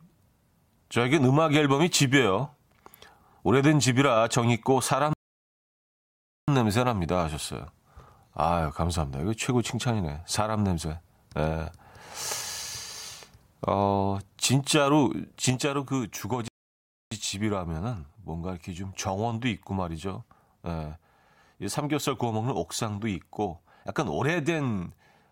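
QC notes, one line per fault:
5.13–6.48 s and 16.48–17.12 s, rebuffering stall: playback halts into dead silence for about 1.35 s, then about 0.64 s, and resumes exactly where it stopped. The player ran dry and waited for data. The waveform shows flat gaps and the spectrogram shows blank vertical bands.
15.50 s to end, sudden gain jump: the speech and the background noise drop together by about 5 dB in a single step, with no fade. This is likely a gain setting applied without a ramp. The waveform envelope steps down abruptly, and the whole spectrogram dims uniformly from that point.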